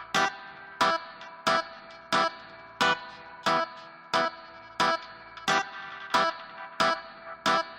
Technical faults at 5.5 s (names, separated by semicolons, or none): none